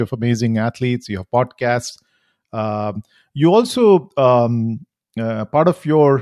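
No technical faults are audible.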